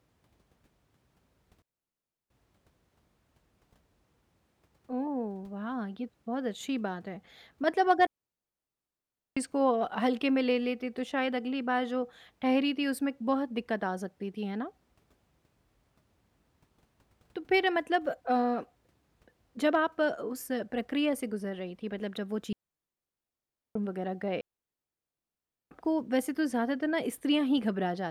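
Clean holes of near silence, with no noise burst around them, fall at 1.62–2.30, 8.07–9.37, 22.53–23.76 and 24.41–25.71 s. These are digital wireless dropouts, where the receiver mutes after losing too much data.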